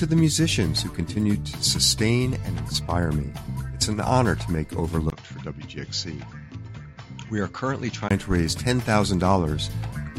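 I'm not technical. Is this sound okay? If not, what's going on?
No. From 5.10 to 8.11 s the sound turns duller and quieter, likely from an input switched to a poorer device. A brief gap at the switch and new background hiss show it isn't simple muffling.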